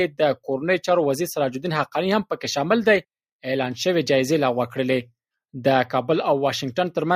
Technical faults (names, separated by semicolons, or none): none